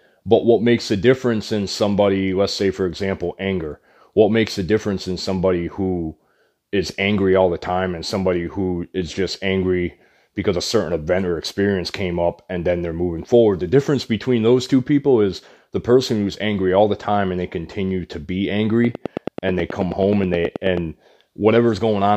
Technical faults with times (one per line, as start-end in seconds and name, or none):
18.85-20.78 train of clicks